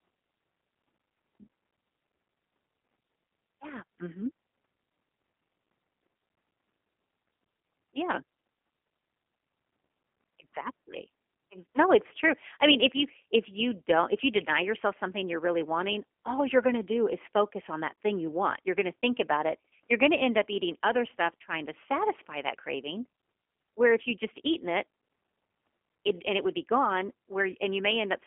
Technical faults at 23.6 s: G.729 codec

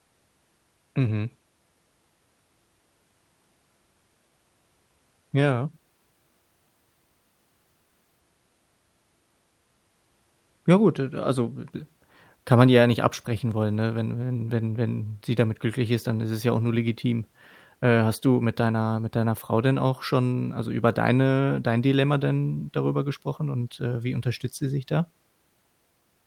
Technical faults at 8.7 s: none

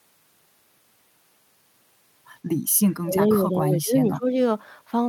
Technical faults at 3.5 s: speech suppressed in double talk

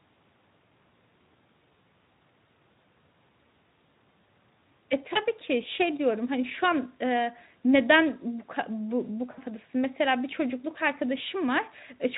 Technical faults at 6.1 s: none

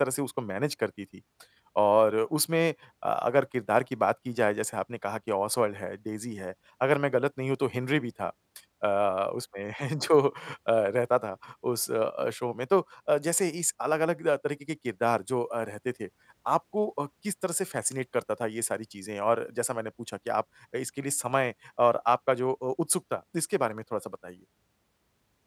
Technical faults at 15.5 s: none

